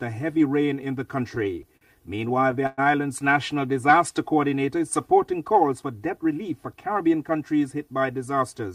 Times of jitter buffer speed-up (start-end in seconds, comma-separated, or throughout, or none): 6.17-6.74